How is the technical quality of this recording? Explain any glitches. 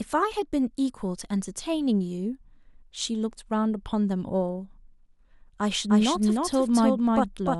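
There's one clear glitch near the end. From 5.89 s to the end, a doubled audio track appears: the same speech comes in again roughly 300 ms behind, at about the same level. It's likely a second, slower capture path mixed in, so you get a hard, dry echo that starts abruptly, with no decay or room sound.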